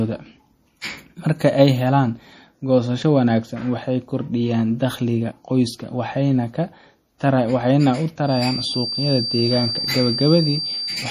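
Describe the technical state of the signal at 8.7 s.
At 8.7 s the speech likely passes through low-bitrate MP3 encoding, at a rate that fits about 40 kbps. Weak frequency lines are dropped frame by frame and nothing remains above 15.1 kHz, which gives a plainly audible watery, swirly quality. From 8.21 s to the end of the clip at 11.1 s there is also a feedback whistle, likely from a loudspeaker-to-microphone loop held just short of runaway feedback. It sounds as a single-pitch 4.7 kHz tone ringing a little below the speech, slowly swelling and fading.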